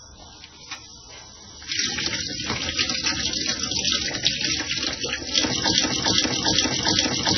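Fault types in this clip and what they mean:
MP3 compression: Throughout, nothing is present above 6 kHz, and the remaining sound is watery and swirly, with weak components flickering in and out and transients smeared. This is likely heavy MP3 encoding, consistent with a very low bitrate around 16 kbps.
Block of digital silence: At 0.75 s the signal drops to silence for about 0.67 ms and returns with no fade. The hole is too short to register as a gap, so it is heard as a tick or dip.
Broken-record loop: From 5.77 s to the end, a fragment of about 0.40 s repeats identically, back to back. This is likely a stalled player or stream resending its last buffered piece, so the audio that belonged in those final seconds is missing.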